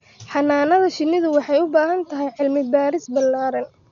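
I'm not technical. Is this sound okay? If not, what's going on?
No. The speech sounds dull and muffled throughout, with a rough, fluttery hiss. Everything above about 6.9 kHz is gone. Heavy Dolby Digital compression is the likely cause.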